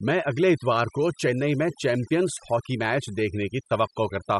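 Throughout the speech, a noise reduction stage was pushed far too hard: it treats any frequency band sitting close to its noise estimate as noise and drives it almost to nothing, taking the softer parts of the voice along with the hiss. This is overdone noise removal. The background collapses into near silence dotted with twinkling, warbling specks.

Also running the whole length is compression damage that most likely comes from Bluetooth LC3 coding, the transform codec of LE Audio. The character points to 10 ms frames at a bitrate around 48 kbps. At that rate the encoder discards much of the upper spectrum and patches it with synthetic noise. The result is plainly audible: a breathy, grainy edge clings to the voice, and the top end sounds noisy.

From 2.34 to 2.37 s, just before "ہاکی میچ", the stream drops out for about 30 ms, which fits three lost LE Audio frames. The decoder covered the gap by replaying the last good spectrum with randomised signs, so instead of a clean break there is a brief noisy smear where the voice's tone dissolves into hiss before the next intact frame restores it.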